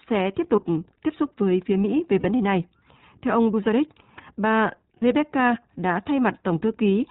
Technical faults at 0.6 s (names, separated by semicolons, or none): iLBC codec; lost iLBC frames